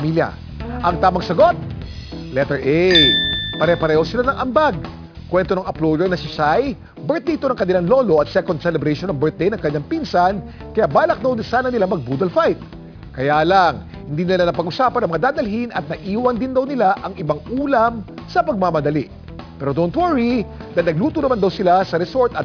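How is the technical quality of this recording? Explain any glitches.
The technical quality is compromised by aliasing that runs the whole way through. The sound was brought down to a much lower sample rate, consistent with about 11 kHz, without a proper low-pass first. Everything above roughly 5.5 kHz folds back down as unrelated, gritty tones, sitting only a couple of dozen dB under the real content, so the top end sounds metallic and crowded right up to the band edge.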